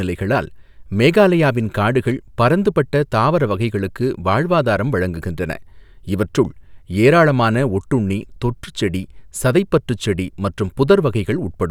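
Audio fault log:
Nothing stood out on listening to the speech.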